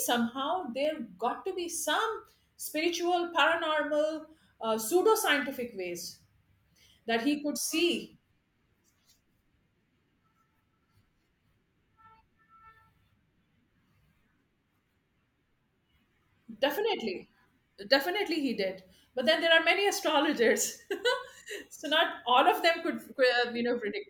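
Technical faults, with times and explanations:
0.85 s, dropped samples: a single sharp click, heard as one thin vertical line across the spectrum. The likely cause is a tiny fraction of a millisecond of the stream going missing, so the waveform jumps abruptly to a later value without removing any audible speech.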